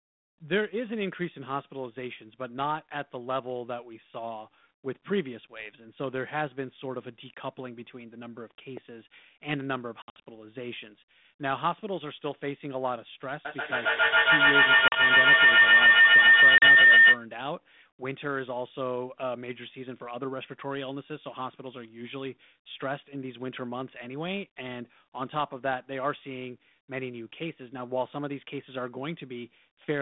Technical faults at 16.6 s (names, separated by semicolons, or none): feedback howl; packet loss on an ADPCM call